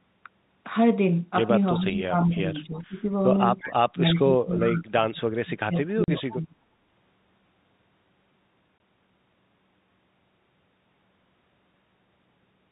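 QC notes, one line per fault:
1.75 to 4.76 s, echo leak: brief delayed scraps of the sound return at 1.75, 2.75, 3.59, 4.14 and 4.59 s, each under a fifth of a second and about 15 to 25 dB below the main level. They trail the original by 353 ms, likely because a far-end echo canceller let some of its loudspeaker pickup back into the line.
1.8 to 3.39 s and 3.93 to 6.56 s, speech suppressed in double talk: the talker dips by up to about 15 dB in the first stretch and about 25 dB in the second, over roughly a second and two seconds of the two spans. This is likely an echo canceller that could not separate the talker from overlapping echo and so turned both down.
6.04 to 6.08 s and 8.78 to 8.80 s, packet loss filled with silence: hard-edged holes of 40 ms and 20 ms cut into the speech. The lengths fit two and one lost 20 ms packets that the receiver replaced with silence.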